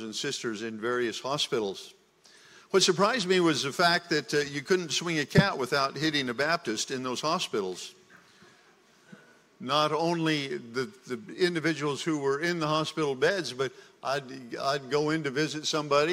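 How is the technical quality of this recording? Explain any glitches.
No glitches turn up anywhere in the recording. There is nothing in it that calls for an explanation.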